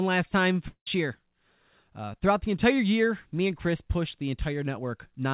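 Speech, carried over a narrowband call path with nothing above 4 kHz, as a telephone codec such as G.711 would give. Right after "last time", from 0.68 to 0.87 s, the audio gives way to a fading buzz, then roughly 80 ms of near-silence, and resumes with about 190 ms of sound missing. This is likely a long network dropout that the receiver papered over with concealment.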